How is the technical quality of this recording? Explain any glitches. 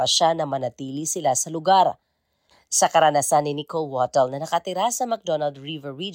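No glitches can be heard.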